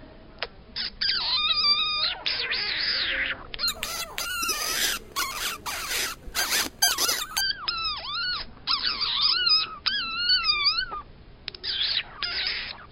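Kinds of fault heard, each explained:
Imaging from sample-and-hold upsampling: from 3.68 to 7.41 s, each sample is repeated without smoothing, which fits a rate jump from about 11 kHz to 44.1 kHz. Mirrored copies about 5 dB below the sound appear from 5.5 kHz up as a metallic fizz. A spectrogram shows reflected bands around 11 kHz, and the waveform shows staircase steps.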